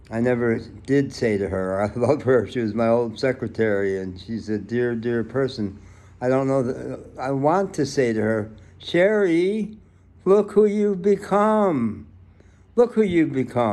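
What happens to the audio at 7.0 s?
Nothing goes wrong at 7.0 s; the audio passes through that moment intact.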